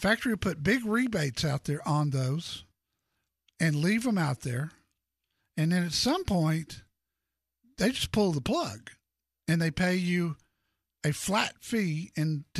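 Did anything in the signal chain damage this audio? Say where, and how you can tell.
No, nothing in the signal chain audibly damaged this speech recording, and the signal holds steady with no stage leaving an identifiable mark on it.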